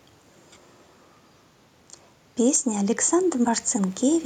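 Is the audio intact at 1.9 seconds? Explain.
No. At 1.9 seconds the speech has gain pumping, present throughout the clip: the background swells between loud sounds and ducks by around 5 dB under each one. The likely cause is excessive input gain held back by a fast limiter, squashing dynamics and modulating the room noise, which sits about 37 dB below the speech.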